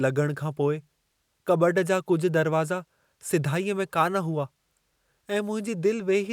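No technical faults are audible.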